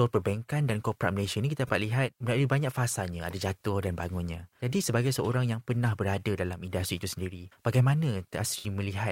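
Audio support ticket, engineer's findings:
AAC frame loss with concealment, two events in speech. First at 1.67–1.70 s, between "ni kita" and "dapat lihat melalui banyak". About 21 ms smeared, noisy patch. Fits one lost frame, filled by the decoder from the last good spectrum. Second at 8.58–8.67 s. About 64 ms smeared, phasey stretch, consistent with roughly three consecutive frames lost. Probable component: AAC decoder's concealment, repeating prior spectral content with altered signs or interpolated energy.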